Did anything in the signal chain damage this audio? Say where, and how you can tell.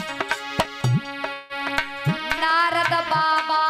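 Yes. The block size mismatch (truncated) sits at the driver or buffer stage and runs for the whole clip. A steady buzz at 46.9 Hz sits under everything, which fits a stage writing 1024-sample blocks while the next stage reads slightly fewer, so the tail of each block is dropped. Every cut repeats at the block rate, creating the buzz. The sizes are close enough that the speed stays at 1.0x, with no audible speeding up.

A call audio freeze, likely caused by packets held up on the network, occurs from 1.33 to 1.53 s. The jitter buffer runs dry and the receiver carries the last sound on, fading it, for about 165 ms, without dropping to silence. When the packets arrive, playback resumes where it stopped, so nothing is missing. Instead, a 165 ms gap has been inserted, and everything after it is delayed by that amount.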